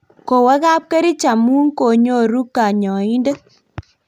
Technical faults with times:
none

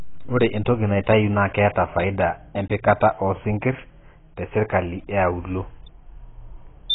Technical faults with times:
0.00-6.94 AAC compression
5.86-6.94 loudspeaker feedback squeal

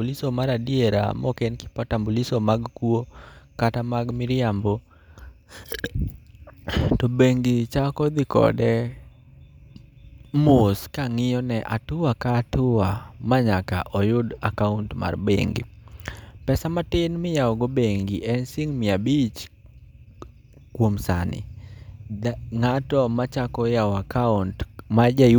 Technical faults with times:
none

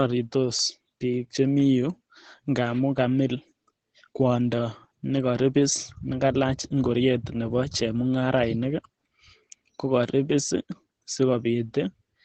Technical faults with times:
0.00-12.25 Opus voice compression

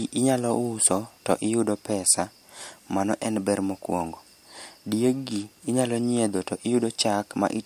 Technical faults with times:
none

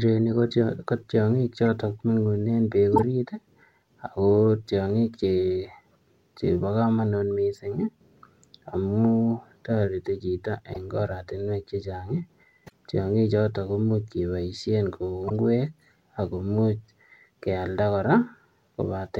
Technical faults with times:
2.94-3.03 corrupt frame decoded
10.73-10.77 corrupt frame decoded
12.66-12.72 corrupt frame decoded
15.28-15.31 corrupt frame decoded

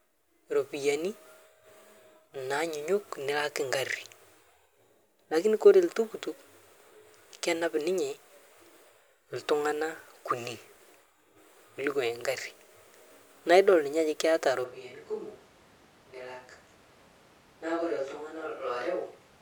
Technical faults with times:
14.66-19.41 switch to a distant microphone

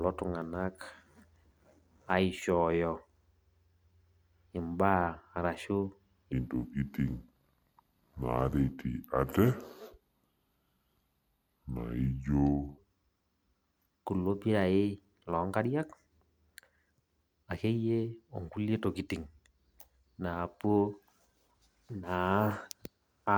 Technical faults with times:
6.32-12.78 section at the wrong speed

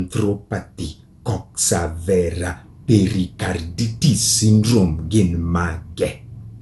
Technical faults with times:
0.00-6.61 generation loss

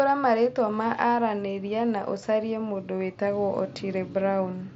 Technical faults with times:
none

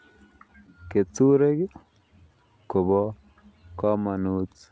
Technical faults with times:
0.00-4.71 clock drift between sender and receiver
0.12-4.67 repeated timing corrections
0.48-1.12 scattered short gaps

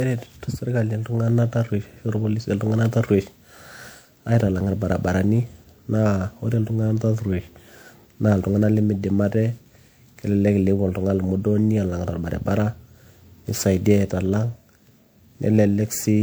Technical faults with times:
0.00-16.22 generation loss

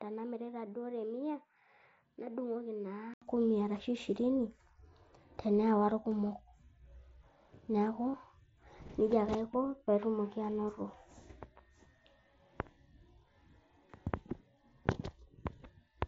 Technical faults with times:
0.00-3.22 input switched to a poorer device
6.11 concealed Bluetooth headset packet loss
8.11-8.14 concealed Bluetooth headset packet loss
14.09 concealed Bluetooth headset packet loss

